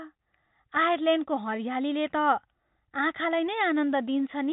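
No faults are audible in the speech; the band-limiting to below 4 kHz and the faint level-following quantisation noise of G.711 telephone coding are present as expected for that path.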